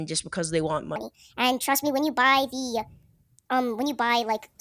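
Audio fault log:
0.96 s to the end, wrong sample rate: right after "just because they want", the speech jumps to 1.45 times its speed and rises about 6.45 semitones. Both change by the same ratio, which fits audio recorded at 22 kHz being played at 32 kHz with no conversion. Pitch shifting or time stretching would each change only one, but here tempo, pitch and vocal timbre rise together, so the voice sounds both faster and higher.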